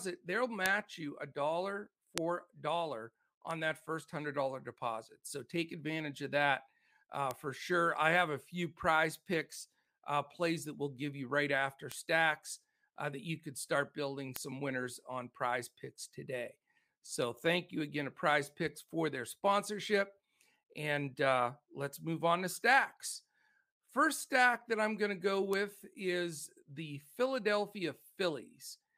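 Seven bit error spikes tick through the speech at 0.66, 2.18, 3.51, 7.31, 11.92, 14.36 and 25.53 s: single flipped bits jumping a sample or a few to between about -28 and -10 dBFS, each a sharp broadband click.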